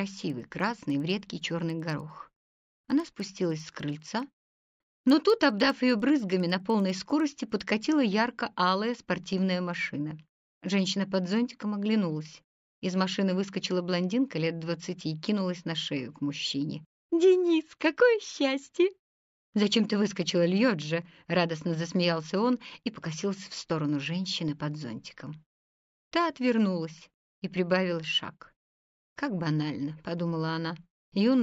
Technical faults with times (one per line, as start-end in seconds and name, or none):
0.00-7.70 resampler restarted on every block